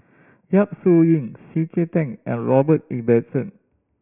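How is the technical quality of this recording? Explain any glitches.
Not great: there's aliasing the whole way through. It sounds like a drop to 6 kHz from 16 kHz with no filtering, so everything above 3 kHz folds back down as gritty, metallic sibilance, roughly 25 dB under the speech.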